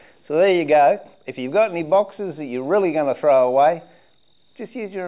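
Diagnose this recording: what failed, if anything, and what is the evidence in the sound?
Nothing in the signal chain points to a failure: level, continuity and timing hold steady across the whole recording, with no discontinuities, level jumps or spectral damage to trace back to any stage.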